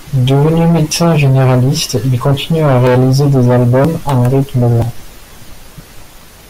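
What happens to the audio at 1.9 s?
At 1.89 s there is a skip: roughly 20 ms of audio is missing between chunks, and the two sides are butted together with no silence, likely from the processor dropping samples while switching between 1-second chunks. Unlike a dropout, no gap of silence is heard, just an abrupt jump.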